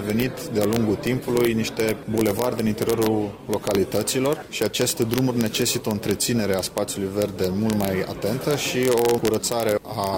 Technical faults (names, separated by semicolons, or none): integer overflow; adaptive stream starting at a low bitrate